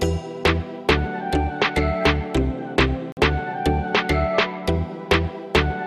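At 3.12 s the audio cuts abruptly to silence and returns at 3.18 s. That is a digital broadcast dropout. The receiver muted while frames failed to decode, and about 48 ms of programme is simply gone, which fits two lost frames.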